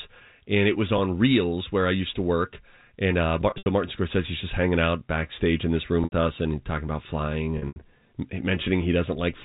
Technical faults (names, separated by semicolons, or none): packet loss with pitch repetition